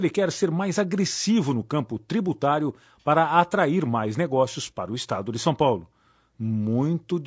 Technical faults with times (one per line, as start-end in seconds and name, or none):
0.00-7.26 low-delay AAC compression